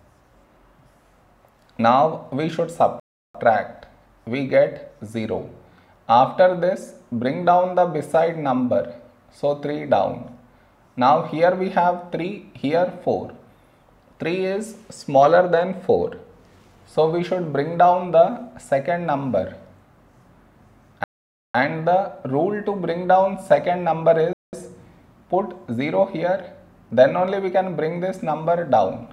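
A Bluetooth stall, likely from interference delaying packets and draining the headphones' buffer, drops the sound to silence three times: 3.00 to 3.35 s, 21.04 to 21.55 s and 24.33 to 24.53 s, gaps of 0.35, 0.51 and 0.20 s before playback resumes.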